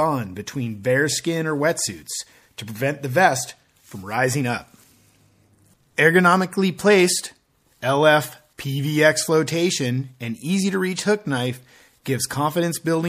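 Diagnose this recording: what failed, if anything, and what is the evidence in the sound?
The failure is at the codec stage, likely MP3 compression starved of bits, and the damage is plainly audible across the whole recording. With too few bits, the encoder has zeroed the weaker frequency lines, which drop in and out from one frame to the next. The result is a watery, swirling texture and smeared attacks, which fits a bitrate of about 64 kbps.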